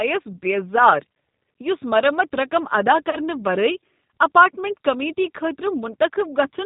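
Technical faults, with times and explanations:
Throughout: G.729 codec. The speech is carried at 8 kbit/s, with the quality pointing to the G.729A variant. Each 10 ms frame is rebuilt from a vocal tract filter, a pitch predictor and a few pulses rather than the original waveform, so nothing above 4 kHz survives. The codec damage is plainly audible: the voice is intelligible but sounds rough, dull and somewhat synthetic.
3.10 to 3.16 s: VoIP packet loss concealed by the speech codec. Just after "رقم ادا" and before "ورٲے اپارٹمنٹ کمیٹی", about 30 ms of audio went missing, which fits a single lost packet. The decoder filled the gap by extending its last pitch and filter settings at falling gain, giving a brief stretched, fading sound. Because each frame builds on the previous one, the voice stays weak or distorted for tens of milliseconds beyond the gap itself.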